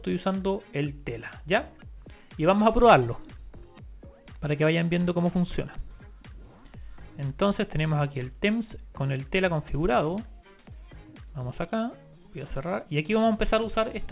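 No faults are audible; the audio comes through a call path with nothing above 4 kHz, which fits a narrowband telephone codec such as G.711 A-law.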